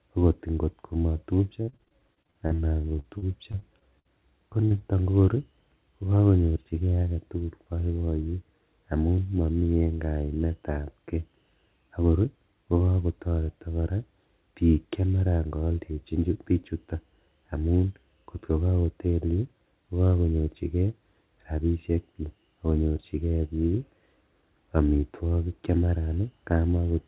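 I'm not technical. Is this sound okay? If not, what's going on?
No, it isn't quite okay. The speech comes through a call-style connection that drops everything above 4 kHz, so it sounds a bit muffled, and there are a few glitches on top of that.

From 1.62 to 4.07 s there's repeated packet loss, which gives it that robotic sound. Chunks of audio went missing about 20 times in a row. Each hole got patched by stretching the previous bit of sound, so the speech turns choppy, with the longest hole near 57 ms.

At 4.65 to 4.73 s comes a burst of packet loss. About 60 ms of audio never arrived, so the system held the last sound and faded it out, which you hear as a brief buzz or hiss. Then the speech jumps ahead with that piece gone.

Right after, at 4.79 to 4.83 s, there's a short stall from a late packet. One piece arrived 20 ms late, so the sound just before it gets held a little too long, as a tiny drag or dip. 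Nothing is actually lost there.

Between 6.56 and 6.88 s, a jitter buffer speed-up kicks in. The system had built up extra delay and caught up by snipping out tiny slices, around 70 ms in total. That stretch plays about 16% fast at normal pitch, so it sounds rushed.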